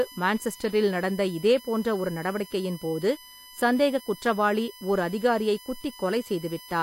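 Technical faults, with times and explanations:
Throughout, USB whine: a steady, fixed-pitch tone sits under the speech, built on a 1 kHz fundamental with its strongest component at the third harmonic, 3 kHz, at roughly 20 dB below the speech level. The 1 kHz spacing matches the USB bus's 1 ms frame timing. Current drawn in each frame leaks into the audio path through shared power or ground, so the bus's polling rhythm is heard directly as a whine.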